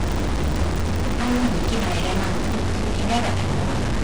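From the start to about 2.57 s, a steady buzz at 25 Hz rides on the speech, rising and falling with its level. This is a filter restarted on every block: it drops its state every 40 ms, so each block opens with a small transient.

Throughout the whole clip, the speech carries distortion, and the pauses fill with hiss instead of falling silent. The likely cause is a stuck bit, one data bit held fixed so that many sample values are offset by that bit's weight.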